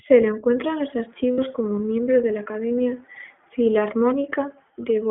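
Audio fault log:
throughout: iLBC codec. The audio is confined to about 150 Hz to 3.4 kHz, and each short frame's excitation is coded independently at a low rate, which fits 15.2 kbps iLBC with 20 ms frames and leaves the speech plainly rough and synthetic.
1.33–1.40 s: lost iLBC frames. Between "lo encuentra en los" and "como miembro de la", a 60 ms gap, consistent with three lost 20 ms frames, is filled by the repeated last pitch cycle mixed with noise. It sounds like a brief buzzy held vowel, and the speech recovers at once because each frame decodes independently.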